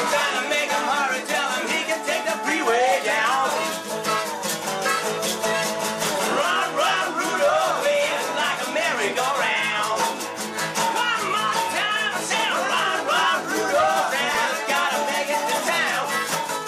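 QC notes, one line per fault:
14.35 s, repeated buffer: new audio arrived late, so a 1.45 ms piece, fitting a 64-sample buffer, played twice more with hard joins, heard as a click or brief buzz. The waveform shows a tiny repeated cycle, the spectrogram a thin vertical stripe.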